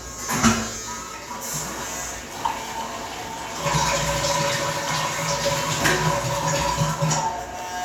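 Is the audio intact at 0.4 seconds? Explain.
Yes, the audio is intact at 0.4 seconds, with no fault at that point.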